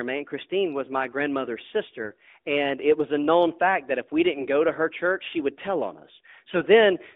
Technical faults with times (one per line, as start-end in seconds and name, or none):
4.34-4.48 AMR bit errors